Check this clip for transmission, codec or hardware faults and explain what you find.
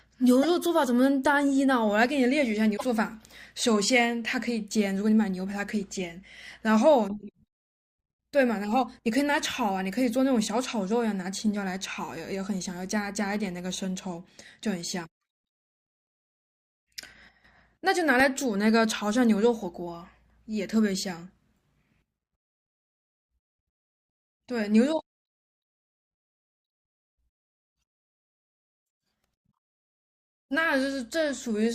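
Three faults are audible: two stretches of damaged data in a compressed stream and one very short block of digital silence.

Damaged data in a compressed stream occurs at 0.43 to 0.45 s and again at 2.73 to 2.84 s. Corrupted bytes make the decoder misread frames and hunt for the next valid header, producing a brief glitch as it resyncs.

The block of digital silence is at 18.20 s, lasting about 0.67 ms, which fits a 32-sample block. The sound drops out and returns with no fade, so the hard edges form a single sharp tick. It carries no chirp or smeared tone, which sets it apart from the codec damage.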